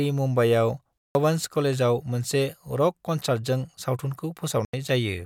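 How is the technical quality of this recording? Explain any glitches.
The speech has two kinds of damage, three spots in all.

Corrupt frame muted, at 0.99 to 1.15 s and 4.65 to 4.74 s: the decoder rejected damaged compressed frames and the player filled in silence. You get abrupt dropouts of about 0.16 s and 0.09 s, sounding like a few lost frames and then one. Timing holds.

Corrupt FLAC frame, at 2.96 s: flipped bits got past an unchecked checksum, so prediction ran on bad values for about 4 ms before a clean frame reset it. It's a brief error, peaking around -54 dBFS.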